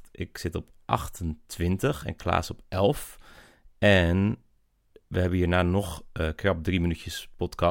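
No dropouts, clicks, distortion or other technical faults can be heard anywhere in the recording.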